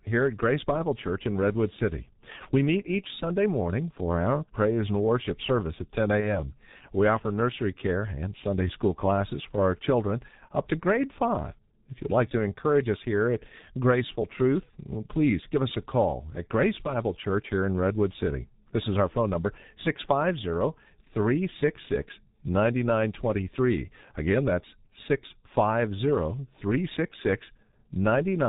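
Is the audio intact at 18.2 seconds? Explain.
No. At 18.2 seconds you're hearing the same G.723.1 codec damage that runs through the whole clip. It's pretty heavy: the speech is muffled, with nothing coming through above 4 kHz, and it has a hoarse, rough edge. The consonants smear because the codec works in 30 ms frames and its voice model updates slowly, so quick sounds get blurred. That muffled, hoarse quality fits a bitrate of around 6 kbit/s.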